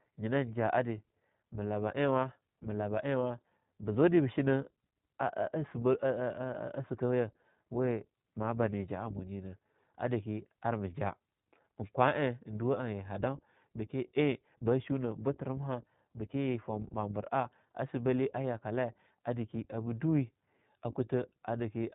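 From start to finish the speech carries iLBC codec damage: nothing above 4 kHz survives, and each 20 ms frame is coded independently, leaving a plainly audible rough, slightly synthetic texture. That fits a 15.2 kbps narrowband VoIP encode.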